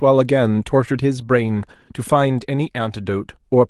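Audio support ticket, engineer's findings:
Nothing to flag here: the speech comes across the call path as expected, with the top end rolled off around 12 kHz in a way that fits the codec's normal band limit.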